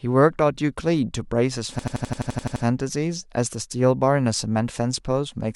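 A system hang loop runs from 1.79 to 2.65 s: the system froze while the audio hardware kept replaying its ring buffer, so one 85 ms slice of speech, which fits a 4096-sample buffer, repeats ten times as an 11.7 Hz machine-gun stutter.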